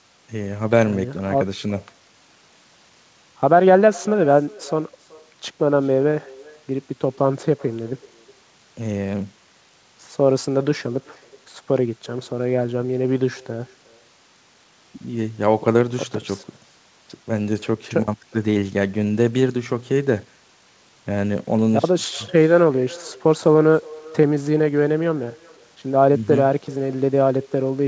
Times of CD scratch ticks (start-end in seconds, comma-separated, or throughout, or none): none